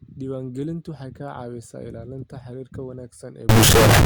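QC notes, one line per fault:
3.49–4.05 s, integer read as float: The last half second becomes a harsh, very loud buzzing square wave. The sound fits 32-bit integer samples decoded as 32-bit float. Most values come out near zero or far past full scale. The output slams between silence and clipping.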